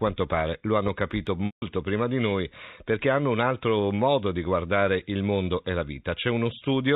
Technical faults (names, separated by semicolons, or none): packet loss with pitch repetition